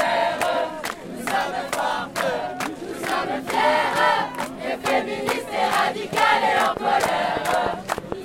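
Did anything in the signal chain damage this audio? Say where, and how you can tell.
Yes. From 6.77 s to 8.13 s a train of clicks rides over the sound: about seven sharp, similarly shaped pulses at roughly 5.2 per second, spaced irregularly, with peaks about 15 dB above the surrounding signal. Their similar shape and their independence from the audio content point to something outside the program material. The likely cause is interference pickup in the analogue wiring, or a faulty connection or power supply injecting impulses during that stretch.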